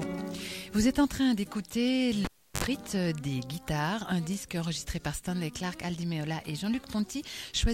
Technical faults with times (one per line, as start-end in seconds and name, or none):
2.25-2.64 cable pulled and plugged in